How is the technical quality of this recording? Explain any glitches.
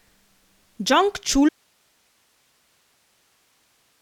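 Not great: the recording has one serious glitch. At 1.49 s the speech drops out abruptly and never returns, leaving only faint hiss, roughly 45 dB down, to the end. It's an audio dropout to a faint residue, likely a lost signal feed while the path downstream stayed live.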